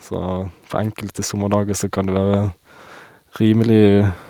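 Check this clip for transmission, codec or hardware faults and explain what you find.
One fault is present, an automatic gain rising, from 0.1 s to 2.56 s. The gain control judged the incoming level too low and stepped its amplification up slowly over those two and a half seconds, lifting the output by about 4 dB in total. Because the gain acts on the whole signal, the speech and the background noise underneath it swell together, so the recording seems to creep closer and louder rather than jumping.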